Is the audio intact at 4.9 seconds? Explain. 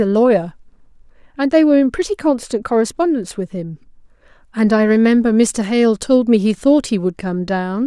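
Yes, the speech at 4.9 seconds plays through cleanly, with no audible fault at that moment.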